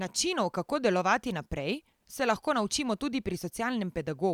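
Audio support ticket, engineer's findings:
Findings: no audible fault in the speech recording; nothing to escalate.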